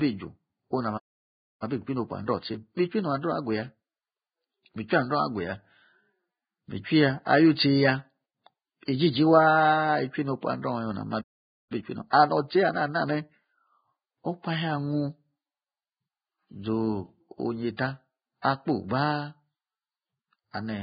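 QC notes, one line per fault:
Throughout: Vorbis compression, likely, at around 14 kbps. Nothing above 4.9 kHz, and the treble is quantised into heavy hiss and grain rather than simply muffled.
1.63–4.63 s and 11.72–13.68 s: time-compressed catch-up. Pieces are cut and cross-faded, hurrying the speech to 1.1x and then 1.25x with pitch unchanged, unlike a speed-up that raises pitch.
12.10–12.13 s and 18.42 s: pre-echo. Block-spread quantisation noise leaks 28 ms and 18 ms ahead of sharp attacks, a short hiss before the onset rather than after it.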